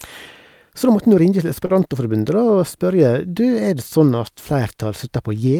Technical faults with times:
1.65-1.81 short stall from a late packet

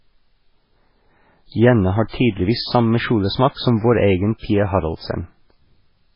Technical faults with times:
0.00-6.15 MP3 compression
2.08-2.13 pre-echo
4.38-4.43 pre-echo

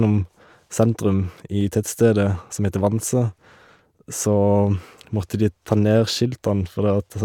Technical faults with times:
1.61 dropped buffer (overrun)

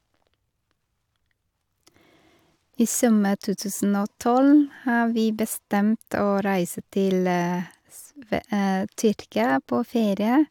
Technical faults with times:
none

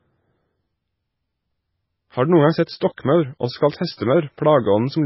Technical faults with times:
0.00-5.05 MP3 compression
2.66 pre-echo
2.96 pre-echo

